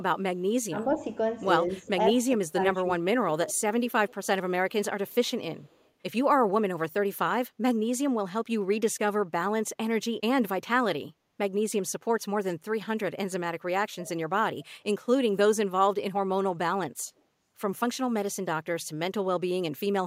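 From 0.69 to 0.99 s and again from 1.69 to 3.01 s, the speech dips by up to about 15 dB: roughly 150 ms of the first stretch and about half a second of the second are pulled down. This is speech suppressed in double talk. The likely cause is that the far side was playing through a loudspeaker while this side spoke, and the echo canceller, unable to tell its own talker from the returning echo, turned both down.

Five times, a delayed copy of a voice comes back 173 ms behind the original: at 3.47 to 4.26 s, about 15 dB below the speech; at 5.08 to 5.31 s and 5.65 to 5.90 s, both about 35 dB down; at 14.04 to 14.10 s, about 25 dB down; and at 17.17 to 17.22 s, about 40 dB down. This is echo leak, likely from a loudspeaker side whose echo canceller let part of what its microphone caught slip back into the call.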